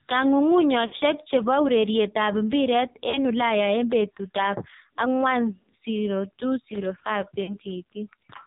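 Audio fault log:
Throughout: AMR narrowband mobile codec. Heavily buzzy, synthetic speech with nothing above 4 kHz, consistent with a low bitrate around 5.9 kbps squeezing a vocal-tract model into few bits.
0.86–0.95 s, 3.10–3.25 s and 7.44–7.58 s: lost AMR speech frames. Drawn-out, fading sound: at 3.10 s after "ureret ap piret", before "ulaya en petut ap". The decoder repeats stale pitch and vocal-tract settings, fading, over roughly 40 to 60 ms gaps.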